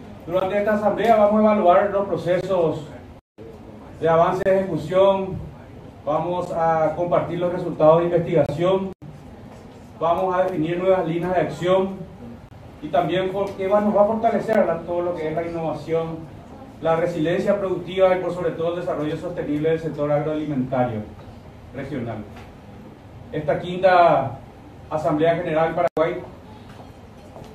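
At 0.40 s a gap between stream segments opens, repeating every 2 s at 2.41, 4.43–4.46, 6.45, 8.46–8.49, 10.48, 12.49–12.51 and 14.53 s. Segment time stamps fail to meet, and the player fills each gap with silence. The results are hard-edged holes of roughly 5 to 30 ms. No audio is lost.

Blocks of digital silence fall at 3.19–3.38 s, 8.93–9.02 s and 25.88–25.97 s, lasting about 186 ms and 93 ms, which fits 8192- and 4096-sample buffers left unfilled. The output drops abruptly to zero and back, with no fade.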